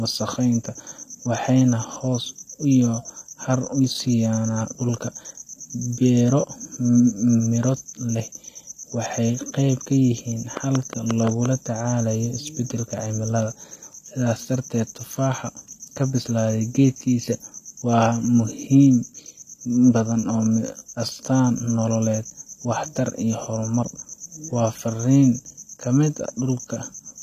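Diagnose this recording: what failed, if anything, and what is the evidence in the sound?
Codec stage: the treble is gritty and lispy on sibilants throughout, with nothing above 14.9 kHz. That points to HE-AAC compression at a low bitrate around 24 kbps, likely. Its spectral band replication synthesises the upper band from copied lower bands. On a spectrogram, the top band looks smeared and repeated, with harmonics breaking at the crossover.

Analogue wiring or interface stage: a train of clicks runs from 10.57 to 11.47 s. About seven evenly spaced pulses arrive at 5.66 per second and peak roughly 15 dB above the signal. A waveform shows narrow spikes of much the same shape. The likely cause is electrical interference or a struggling interface.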